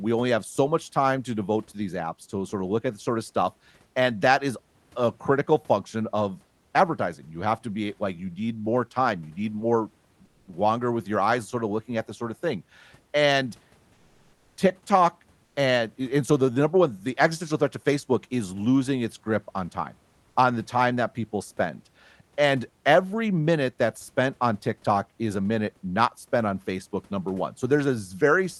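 A speech recording carried over a call path whose Opus coding cuts the highs at about 12 kHz shows comfort noise in place of the background from 15.45 to 15.55 s, just before "and and so the". The likely cause is discontinuous transmission: with no speech detected, the sender paused and the receiver filled that 100 ms gap with synthetic noise. The room's real background gives way to a flat, featureless hiss about 4 dB quieter until the voice resumes.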